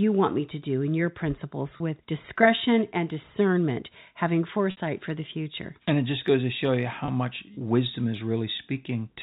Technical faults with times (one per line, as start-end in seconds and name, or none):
1.77-1.80 packet loss with pitch repetition
4.71-4.77 packet loss with pitch repetition
7.05-7.08 packet loss with pitch repetition